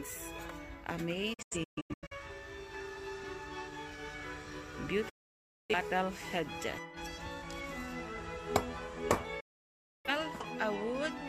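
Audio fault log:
1.34–2.15 s, 5.09–5.75 s, 9.4–10.1 s: digital broadcast dropout. The receiver mutes on bad frames with 8 ms fades, leaving blank spectrogram columns and flat waveform. The first dropout is scattered short holes.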